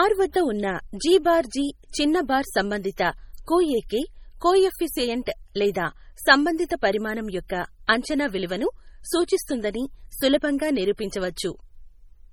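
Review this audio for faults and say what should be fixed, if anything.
Heavy MP3 compression damage runs throughout the speech, likely from encoding at a very low bitrate, which fits about 32 kbps. Weak frequency lines drop in and out between frames, giving a watery, swirly texture, chirpy s sounds and smeared onsets. On a spectrogram this shows as flickering holes and patchy blocks in the upper bands, with nothing above 20 kHz. Re-encode from the original source at a much higher bitrate, or keep it lossless.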